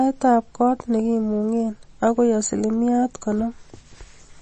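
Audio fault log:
throughout, MP3 compression: watery, swirly speech, with a flat spectrogram ceiling at 8.4 kHz and flickering gaps below it, likely from low-bitrate encoding near 32 kbps.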